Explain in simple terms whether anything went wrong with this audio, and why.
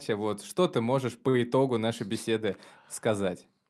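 Something did go wrong, briefly, at about 1.29 to 1.36 s, right after "вот что ты можешь" and just before "итогу нашей беседы". It's a short stall from a late packet: one chunk of audio showed up late, so the player ran out of sound to play. Instead of going silent, it stretched the last bit for about 46 ms, then picked up where it left off. Nothing gets lost, but that moment hangs a touch too long, and everything after it lands about 46 ms late.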